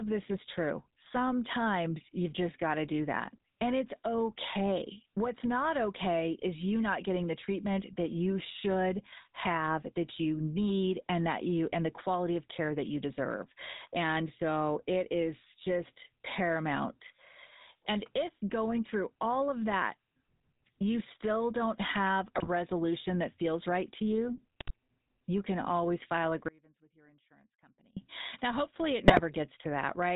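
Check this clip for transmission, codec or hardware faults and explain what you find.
Three faults are present in this speech: GSM coding throughout, bursts of GSM bit errors at three points, and one dropout that leaves only a faint residue.

GSM full-rate codec, throughout the whole clip. The coder models the vocal tract and excites it with a sparse regular pulse train, which fits the 13 kbps GSM full-rate scheme. Everything above 4 kHz is gone, and the speech carries a plainly audible buzzy, gravelly roughness.

GSM bit errors, at 22.35 to 22.49 s, 24.60 to 24.73 s and 29.08 to 29.22 s. Corrupted bits reached the decoder and scrambled the filter, pitch and gain parameters for a few frames. Each burst lasts about 0.13 s and breaks the speech into squawks, pops and gargling.

Audio dropout to a faint residue, from 26.49 to 27.97 s, lasting 1.48 s. The speech cuts off abruptly, and only a faint trace about 30 dB below normal level remains until it returns just as suddenly. 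The likely cause is a loss of the wanted signal while the downstream path stayed live.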